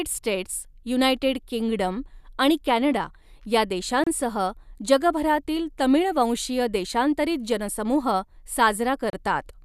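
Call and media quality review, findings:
Gap at a join of encoded pieces, 4.04–4.07 s, just after "किंगडम आणि कॅनडा या", 30 ms gap, and 9.10–9.13 s, 32 ms gap, in continuous speech. Probable component: segment concatenation after separate encodes, with encoder start delay and final-frame padding left untrimmed. Edges are codec-smeared. Speech resumes exactly where it stopped, with nothing missing. That rules out packet loss, which drops audio or fills with concealment, and a dropout fade.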